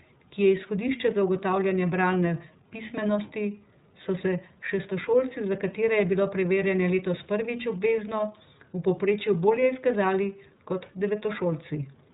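The whole clip is speech squeezed through the iLBC codec, and the damage is plain to hear from start to finish. Everything above 4 kHz is gone, so it has that narrowband phone-line feel, and the voice comes out a bit rough and synthetic. iLBC rebuilds the excitation for each frame on its own. The graininess here fits 30 ms frames, and the sound points to the 13.33 kbps mode.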